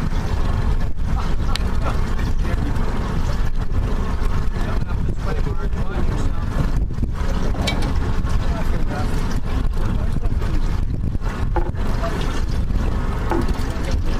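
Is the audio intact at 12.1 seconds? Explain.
No, there's a click every 0.63 s from 0.15 to 14.05 s, likely clock drift buffer slips: mismatched clocks make the buffer drop or repeat a few samples.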